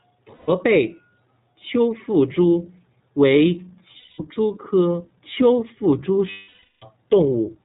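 The whole clip runs through the iLBC codec, and the damage is plainly audible. Everything above 4 kHz is gone, so the speech sounds narrowband, and there's a rough, slightly synthetic edge, which fits iLBC's 20 ms frame mode at around 15 kbps. Each frame's excitation is coded on its own.

Then there are lost iLBC frames, three times. From 0.34 to 0.50 s there's a 140 ms hole where the decoder just repeats the last pitch cycle with some noise mixed in, so you hear a held, faintly buzzy vowel. The second, from 3.98 to 4.21 s, comes right after "丘腹蛛为" and lasts 200 ms before "蛛科丘腹" comes back. The longest starts after "科丘腹蛛" at 6.30 s and runs to 6.85 s, about 520 ms, fading as the concealment runs out. Because iLBC frames stand alone, the speech snaps back straight after each gap.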